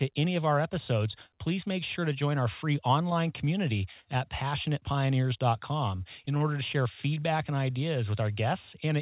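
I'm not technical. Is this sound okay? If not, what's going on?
No, not entirely. Between 5.96 and 6.42 seconds, just before the words "to share", there is repeated packet loss, which gives a robotic sound. Bits of the call arrived late or not at all, five times in under half a second. Each time, the receiving end covered the hole by stretching out the sound it had just played. The gaps are tiny, the longest about 28 milliseconds. Because they come so close together, the speech turns choppy and machine-like there.

Right after "to share" come two short concealed packet losses, at 7.14 to 7.18 seconds and 7.20 to 7.25 seconds. Each time, about 20 milliseconds of sound went missing. The receiver filled each hole with a guessed continuation and then blended back into the real speech. You hear this as a quick smear or wobble, twice in a row. A very short sound may be lost in the patch.

The whole call also sounds narrow, like an old phone line. 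That is because it went through a phone-style codec that keeps nothing above 4 kHz.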